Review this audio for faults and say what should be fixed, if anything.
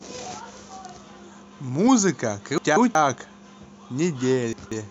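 Frames out of order at 2.58–2.95 s and 4.53–4.90 s: two neighbouring blocks of about 186 ms play swapped, giving a garbled flutter. Unlike a dropout, no time is lost. Prevent it by reordering frames by sequence number in the receive buffer before decoding.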